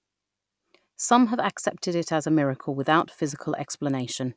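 After "it as a miracle" (2.8 s), the resampler restarted on every block. Separately converted 100 ms blocks leave 10 Hz ticks, seen as vertical spectrogram lines.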